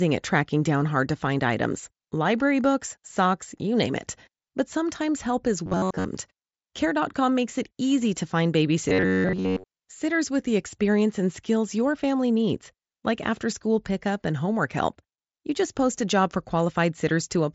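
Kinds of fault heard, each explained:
Robotic sound from repeated short buffers: from 5.66 to 6.05 s, after "sometimes help is", and from 8.89 to 9.64 s, between "it easy to find" and "sitters with the experience", the speech collapses into a rigid metallic buzz near 94 Hz. It is likely caused by audio arriving too seldom, with playback looping a chunk of about 10.7 ms in place of most of the real signal, so the loop rate sets the buzz.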